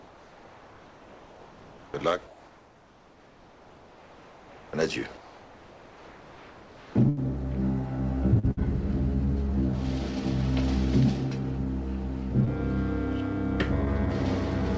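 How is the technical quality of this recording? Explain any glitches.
The recording has several call-network glitches: three stretches where the background sounds artificial, two short dropouts, and two brief smears. The audio carries nothing above 8 kHz, which fits a wideband G.722 call codec.

Comfort noise in place of the background, 0.00–1.94 s, 2.27–4.73 s and 5.17–6.95 s: the background turns into a steady, featureless hiss about 2–3 dB quieter than the real one. The likely cause is discontinuous transmission, where the receiver synthesises noise while the sender pauses.

Burst of packet loss, 7.09–7.19 s and 8.51–8.59 s: the last sound is held and fades over about 80 ms and 60 ms, then the audio jumps ahead with that section missing. The receiver extended the final packet it had until real data returned.

Short concealed packet loss, 8.39–8.45 s and 12.45–12.49 s: a brief smear or wobble lasts about 40 ms and 16 ms. 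Packets arrived too late to play, so the decoder stretched the preceding sound across the hole and blended back into the real audio.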